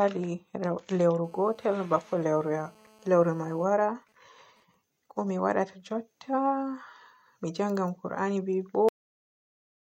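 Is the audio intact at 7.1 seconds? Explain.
Yes, the speech at 7.1 seconds plays through intact, with no audible fault at that moment.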